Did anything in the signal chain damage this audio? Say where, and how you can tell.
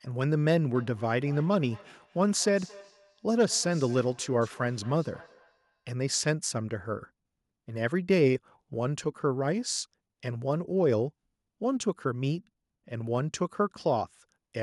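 Yes. From 0.74 to 6.3 s the speech returns at a steady interval of roughly 200 ms, about 24 dB below the speech. That is feedback echo between two devices, a call-processing fault. One device replays the other's microphone feed, which gets re-captured, beyond either echo canceller's reach.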